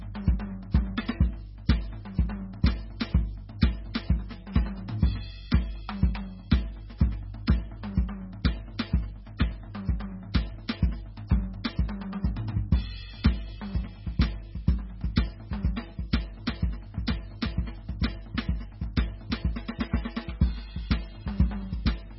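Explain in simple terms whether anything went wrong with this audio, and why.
Something did go wrong across the whole piece of music: it sounds like heavy MP3 compression, which is the likely cause. Nothing comes through above about 5.6 kHz, so the top end is missing and the music sounds dull. The tell is the watery, swirling texture and the metallic chirps on bright, sharp sounds, because faint detail keeps flickering in and out. A simple treble cut would sound muffled but steady, without that swirl.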